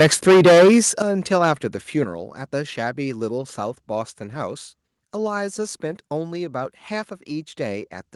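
Speech, and it opens with heavy microphone overload from 0.0 to 0.88 s, driven about 14 dB past full scale so that something like a third of the samples are flattened, which gives a harsh, crackly edge. A milder burst, about 2 dB over with only a sliver clipped, follows from 1.32 to 1.51 s. The likely cause is an input gain set too high for the converter. You can also hear the microphone volume stepped down twice, a sudden drop of about 11 dB at 1.02 s and another of about 6 dB at 2.04 s. Both likely come from the call software pulling the device gain back after the overload. The Opus call path's high end stops around 12 kHz.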